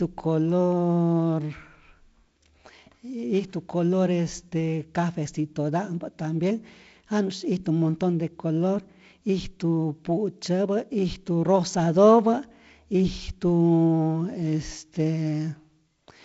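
Nothing in this speech clip is technically wrong. It has been through G.722 wideband telephone coding at 48 kbit/s, so nothing is heard above about 7.7 kHz, and the codec leaves only a light trace on the sound.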